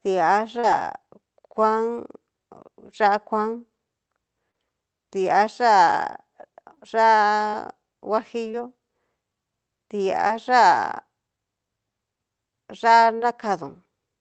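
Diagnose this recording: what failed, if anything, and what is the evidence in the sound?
Network trouble, short concealed packet loss: quick smears at 0.59, 4.51, 6.75, 7.50, 8.51, 10.27 and 13.17 s, where 20 to 40 ms went missing and got patched by stretching the preceding sound.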